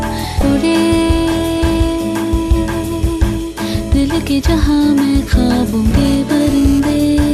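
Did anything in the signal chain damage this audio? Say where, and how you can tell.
Yes, at two stages. The first is in the compressed stream itself, during decoding of stored or streamed data. Brief blips at 0.39 to 0.42 s and again at 5.88 to 5.91 s are damaged data in a compressed stream. At those points the decoder met corrupted frames, lost sync and skipped ahead to the next valid header, producing a short glitch. On a spectrogram each shows as a thin vertical smear of broadband energy. The waveform has a small discontinuity there.

The second fault enters in the analogue wiring. From 6.05 to 6.80 s a hard, raspy GSM phone buzz sits about 18 dB below the programme. It repeats at 217 Hz, the burst rate of a nearby 2G handset, whose radio pulses were rectified by the audio circuitry. It is intermittent rather than steady, as with a phone transferring data. On a spectrogram it forms a dense comb of harmonic lines spaced 217 Hz apart, switching on and off. 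The waveform shows regular rectangular pulse trains.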